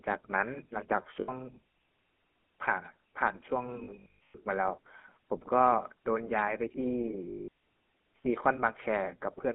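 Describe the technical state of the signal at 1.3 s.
At 1.3 s the signal is at the very end of a burst of lost GSM frames spanning 1.2 to 1.3 s. For about 80 ms, which fits four dropped 20 ms frames, the decoder repeats the last good frame's settings, giving a brief rough, metallic ring. A dropout would leave a clean gap instead. Underneath, the GSM full-rate codec is plainly audible: pulse-driven vocal-tract modelling gives a buzzy, gravelly roughness within a 200 to 3400 Hz line band. That is coarser than the muffled, band-limited but smooth sound of narrowband filtering alone.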